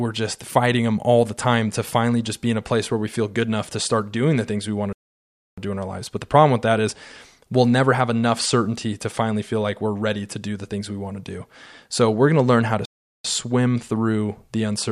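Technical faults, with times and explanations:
4.93 to 5.58 s: playback stall. The player was likely starved of data or blocked, so the speech cuts out after "things we want to" for about 0.65 s of silence, then resumes at "do in our lives" as if nothing was lost.
12.85 to 13.24 s: playback stall. A second interruption of output leaves a gap of about 0.39 s after "to learn how to". The speech picks up at "swim through the", so the flow halts abruptly mid-sentence rather than skipping ahead.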